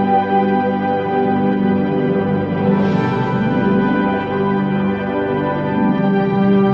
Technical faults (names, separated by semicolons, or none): none